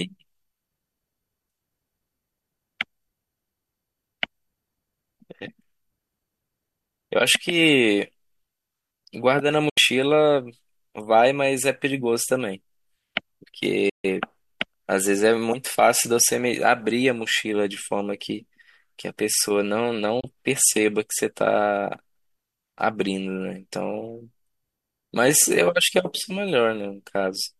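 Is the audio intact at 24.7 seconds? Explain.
Yes, the audio is intact at 24.7 seconds, with no dropout, click, distortion or other fault audible at that point.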